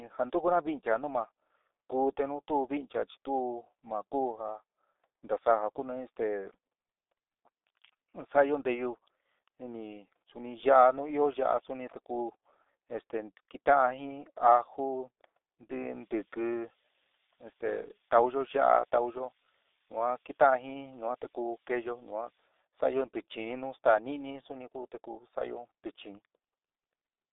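The speech runs through the G.723.1 codec for its entire length, narrowed to a telephone band of about 250 Hz to 3.7 kHz, with nothing above 3.8 kHz. The damage is heavy: the speech turns muffled and hoarse, and consonants smear. That fits the 6.3 kbit/s mode, where 30 ms frames and a sluggish voice model blur fast transitions. Plain band-limiting would sound thin but clean. Here the roughness and smearing come from the codec itself. From 15.8 to 22.5 s a switching supply whistle appears, a high tone between 9.2 and 11.4 kHz, centred near 10 kHz and roughly 20 dB below the speech. It sits far above the codec's cutoff, so it enters after the narrowband path. Its high pitch marks it as a power supply whistle rather than a mains hum.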